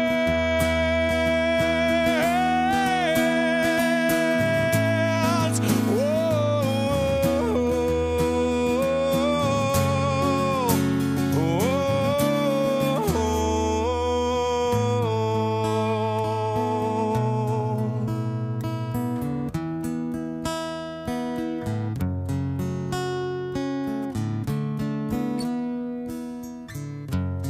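Nothing goes wrong anywhere in this one, so there's no fault to point to at any moment of the audio.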